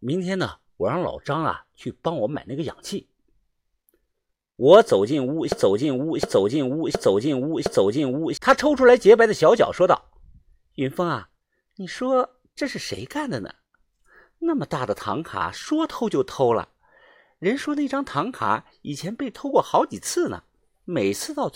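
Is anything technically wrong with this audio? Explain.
Yes. A broken-record loop runs from 5.52 to 8.37 s. A 0.71 s fragment of the speech repeats four times back to back, identical on each pass. The player or stream likely stalled and kept resending its last held chunk, so the speech meant for that stretch is lost.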